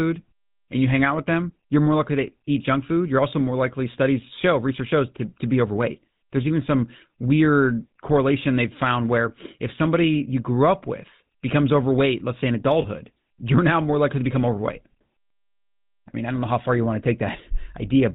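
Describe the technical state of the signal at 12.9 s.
Lost GSM frames at 12.82 to 12.85 s, just before the moment asked: the decoder replaced a missing block, consistent with a single 20 ms frame, by repeating the last good frame's settings. The result is a brief, rough metallic ring in place of the true sound.

The GSM full-rate codec runs throughout, its damage plainly audible here too. It models the vocal tract driven by sparse regular pulses, which fits a 13 kbps stream, passes nothing above 4 kHz, and leaves the voice buzzy and gravelly.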